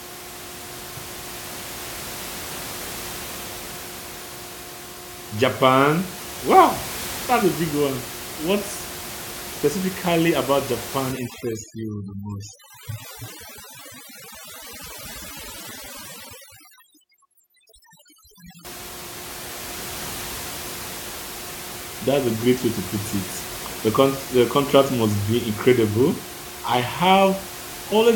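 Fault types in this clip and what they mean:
Overdone noise removal: from about 11.12 to 18.65 s a noise reduction stage is set too aggressively, pushing individual frequency bands down or out whenever they sit close to its noise estimate. The room noise, which elsewhere sits about 13 dB below the speech, drops and breaks up into twinkling specks, and the quieter parts of the speech are cut along with it.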